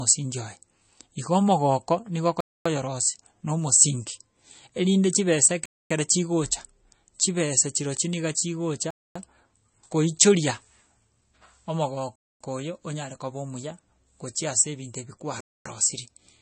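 It's a speech recording, and the whole thing has that watery, swirly quality you get from heavy compression. Nothing comes through above about 8.3 kHz, so the top end is simply gone, and weak detail flickers in and out from frame to frame, smearing the consonant edges. That's most likely MP3 compression working on a starved bit budget, which fits a low rate somewhere around 32 kbps. The damage is plainly audible. On top of that there's a gap between chunks: 250 ms holes of silence at 2.41, 5.66, 8.91, 12.16 and 15.41 s. They land like clockwork every 3.25 s, which points to the audio being handled in 3-second chunks with a quarter-second of dead air left at each join, from padding or a player starting each chunk late. Nothing is missing, it just gets chopped up at a steady rhythm.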